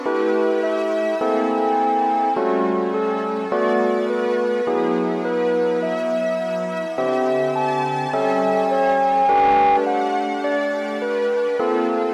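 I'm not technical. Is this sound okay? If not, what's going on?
No. There is loudspeaker feedback squeal from 1.18 to 2.42 s and again from 7.25 to 9.84 s. A single 812 Hz tone swells up, quickly the first time and over about two seconds the second, rather than starting at full strength like a steady hum.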